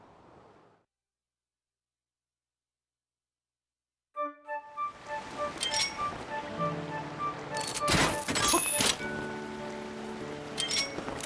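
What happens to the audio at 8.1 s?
Nothing goes wrong at 8.1 s; the audio plays through that moment intact.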